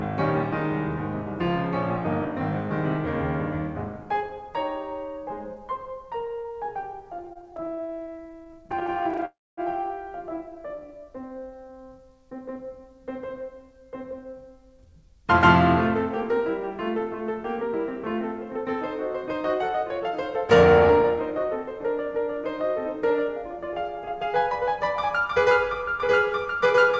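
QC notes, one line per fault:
7.19–9.25 s, repeated stalls (stutter): the music keeps catching for brief moments, 44 tiny holds, none longer than about 20 ms, adding up to about 0.44 s, roughly a fifth of this stretch. Packets were reaching the receiver more slowly than they were played, so the jitter buffer kept running dry and the last sound was stretched each time. Nothing is lost, but the music drags and jerks. On a waveform this appears as short repeated, near-identical cycles. On a spectrogram it shows as thin vertical smears breaking up the note onsets.
9.25–9.60 s, call audio freeze: the music halts for about 0.32 s. The last sound is carried on briefly as a decaying buzz or hiss, then falls to about 0.24 s of silence before resuming exactly where it stopped, so the playback is now running later. The likely cause is packets held up in transit, which left the jitter buffer empty. 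The waveform shows a short tail collapsing to flat line. On the spectrogram a blurred band fades into an empty gap.
10.55–11.73 s, jitter buffer slow-down: the music runs at about 85% speed with its pitch unchanged. About 188 ms is added by repeating single pitch cycles over and over, which lets the buffer rebuild its reserve. Notes and rhythms sound drawn out. On a waveform the periods repeat in identical runs. On the spectrogram the harmonics stay level while every event is stretched wider in time.
13.37–15.34 s, 16.31–17.69 s and 18.57–24.30 s, jitter buffer speed-up: the music runs at about 107%, 103% and 104% speed, with pitch held. Roughly 0.15 s, about 50 ms and about 0.3 s are cut out by removing short pitch-period pieces, which trims the excess delay left in the buffer. The first stretch sounds hurried, and the tempo is unsteady. The spectrogram shows horizontally compressed events at unchanged harmonic height, and the waveform shows small splices. 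Across the G.722 call path nothing is present above 8 kHz.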